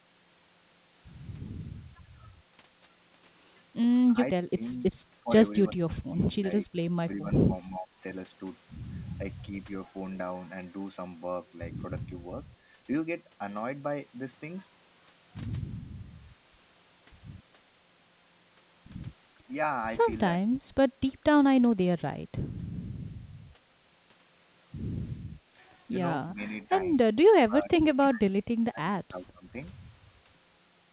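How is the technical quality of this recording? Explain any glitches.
The speech is marred by repeated dropouts from speech suppressed in double talk, at 4.51 to 4.85, 5.2 to 5.29, 5.68 to 7.99, 20.51 to 20.68, 21.16 to 21.23, 21.61 to 21.88, 26.33 to 26.7 and 27.11 to 29.58 s. An echo canceller likely mistook the talker for loudspeaker echo while both sides spoke, and turned the talker down. The voice sinks by up to roughly 20 dB or breaks into pieces, worst in the two long stretches. Throughout, the band stops at 4 kHz, consistent with G.711 telephone coding.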